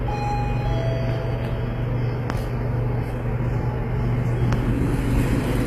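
A short recording of sounds, and the codec damage is plain all the way through. The top end has that bright but synthetic, metallic quality you get when the treble is rebuilt from copies of lower bands instead of being coded directly, so it doesn't quite line up with what's underneath. Nothing comes through above about 15.4 kHz. All of that points to HE-AAC compression as the likely cause, probably v2 at a low rate around 24 kbps.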